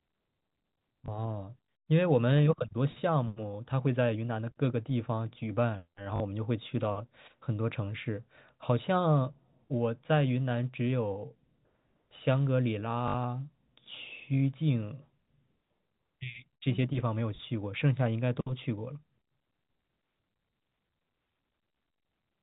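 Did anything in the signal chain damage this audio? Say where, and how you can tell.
Yes. Network packet loss with the last packet repeated fills gaps of 20, 40 and 60 ms at 1.06, 6.16 and 13.08 s, so the single repeat at 1.06 s sounds like a small blip and the two longer runs like a buzzy robotic stutter.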